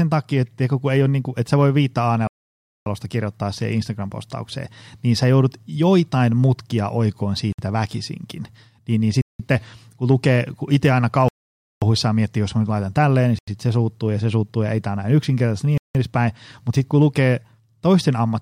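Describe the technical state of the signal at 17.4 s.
The speech at 17.4 s comes through intact, with no fault at that moment.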